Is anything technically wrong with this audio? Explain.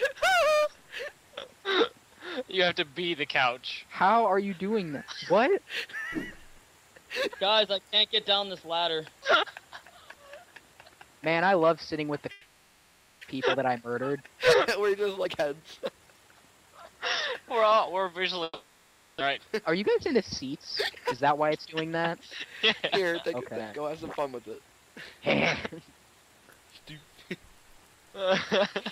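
Yes, there are two long network dropouts, each followed by a jitter buffer speed-up.

At 12.31 to 13.25 s the stream likely lost a long run of packets. About 600 ms of audio never arrived, and the receiver filled 920 ms by stretching the last sound into a fading buzz-like continuation before the real audio resumes further on. At 18.43 to 19.22 s the same happens again: 770 ms is concealed, the fill thins into about 10 ms of silence, and about 600 ms is gone.

After the first gap, the late audio landed in a bunch and left the buffer holding roughly 300 ms too much. From 15.02 to 16.67 s the receiver trimmed short pitch-period pieces repeatedly, so the sound runs at 117% speed with unchanged pitch and feels noticeably rushed. From 19.38 to 21.67 s a milder catch-up removes roughly 150 ms at 106%, giving a slight, subtler hurry.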